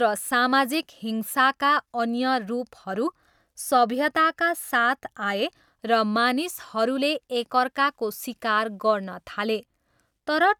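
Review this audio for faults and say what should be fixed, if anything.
No faults found in the speech; nothing to fix.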